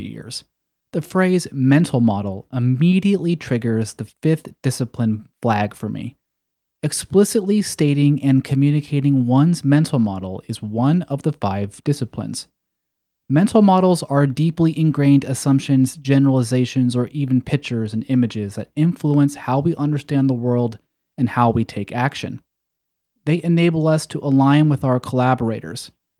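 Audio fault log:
No faults heard.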